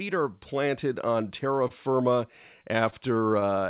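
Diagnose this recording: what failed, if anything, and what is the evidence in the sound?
Network and jitter buffer stage: short stalls from late packets at 1.68–1.72 s, 2.90–2.94 s and 3.40–3.44 s. Each time a packet arrived late, the buffer ran dry and the receiver stretched the last sound by roughly 20–24 ms. Nothing is lost, but the sound briefly hangs with a slight buzz or dip, and the added playout delay shifts everything after it.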